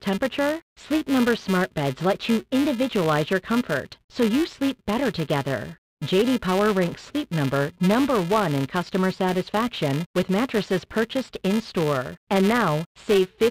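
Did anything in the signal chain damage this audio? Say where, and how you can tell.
Yes. A filter in the block-based processing stage restarts on every block, losing its state each time. Throughout the speech, every block opens with a small transient, heard as a level-following buzz at 375 Hz, which fits 128-sample blocks at 48 kHz.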